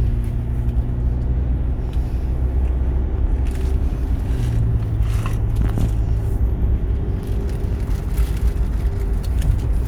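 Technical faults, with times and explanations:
Listening closely, nothing stood out as a technical problem anywhere in this recording of sounds.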